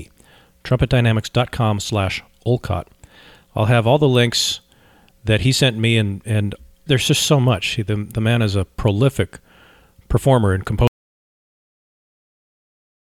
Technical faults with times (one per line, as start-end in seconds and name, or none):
10.87-13.13 audio dropout to silence